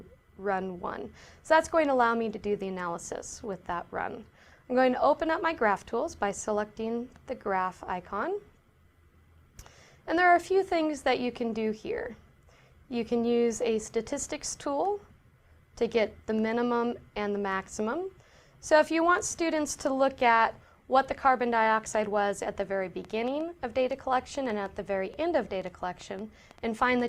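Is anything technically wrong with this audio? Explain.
Yes. From 23.05 s to 27.01 s there is a train of clicks: about fifteen near-identical pulses at roughly four per second, unevenly spaced, peaking at about the level of the sound itself. The likely cause is interference or a faulty connection or power supply. Unlike random crackle, the clicks share one shape and keep recurring, ticking through pauses too.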